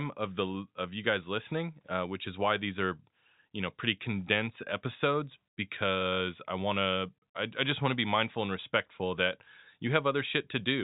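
No faults can be heard.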